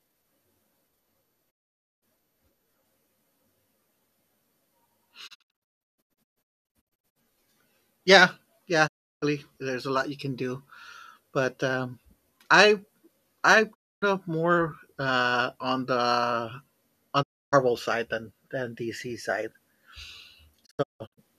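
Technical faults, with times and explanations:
1.49 to 21.19 s, digital broadcast dropout: The sound mutes at 1.49–2.04, 5.26–7.17, 8.86–9.24, 13.73–14.04, 17.21–17.54 and 20.65–21.19 s. The receiver lost frames and muted, fading out over 20 ms. At 5.26 and 20.65 s, short scattered holes appear. The longest lasts 0.22 s. Speech sent during each gap is gone.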